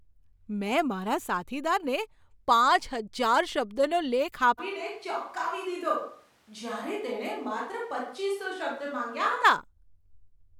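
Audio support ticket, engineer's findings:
Switch to a distant microphone, 4.60–9.43 s: speech abruptly roomy, thinner, about 5 dB quieter, noise near 30 dB below speech. Likely close-mic signal dropped, fallback to distant pickup.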